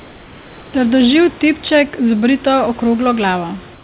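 Speech over a narrowband call path with nothing above 4 kHz, where the sender likely paused transmission in silence, so comfort noise in place of the background fills 0 to 0.74 s and 3.74 s to the end: steady, featureless hiss about 3 dB quieter than the real room noise.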